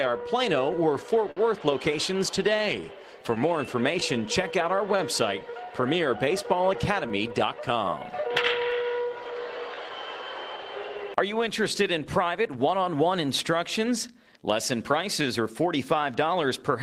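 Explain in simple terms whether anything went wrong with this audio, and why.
Clock drift between sender and receiver affects the whole clip. The sending device's clock ran about 5% slower than the receiving one, so audio arrived too slowly. The receiver's waiting buffer kept running low, and the receiver had to keep patching in extra material to stay in step.

Repeated timing corrections run from 0.18 s to 16.47 s. To cover the slow arrival, the receiver kept repeating short pieces, stretching playback to about 96% speed and adding roughly 0.7 s overall. The edits are small, unevenly spaced and all in the same direction.

Scattered short gaps appear between 1.16 s and 15.26 s. About fifteen bits of audio went missing or came late, one here and one there. The receiver filled each hole by continuing the last sound. The longest is around 50 ms, and together they total roughly 150 ms.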